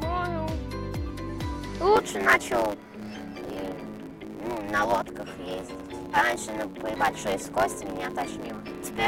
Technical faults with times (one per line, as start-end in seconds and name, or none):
1.95-9.08 block size mismatch (truncated)